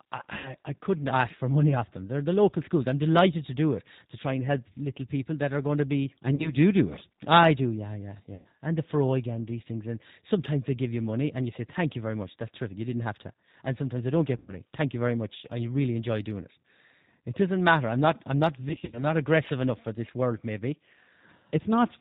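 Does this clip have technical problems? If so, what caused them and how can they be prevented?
Yes. G.729 codec, throughout: this 8 kbit/s speech coder rebuilds the voice from a filter and sparse pulses, cutting everything above 4 kHz and leaving a plainly rough, synthetic tone. Prevent it by using a wideband codec such as Opus or G.722 on the call.

VoIP packet loss concealed by the speech codec occurs at 0.38–0.49 s, at 6.35–6.53 s after "are going to be", at 8.35–8.47 s after "I do yeah yeah", at 14.37–14.55 s after "sometimes they don't get", and at 18.69–19.04 s. At each point the decoder stretches its last pitch and filter into a fading buzz or coloured noise, which fits roughly 40–140 ms of missing audio. The last event is spread as short scattered gaps, and the voice stays weak briefly after each one. Prevent it with a more stable network path, QoS priority for voice traffic, an adequate jitter buffer, or forward error correction.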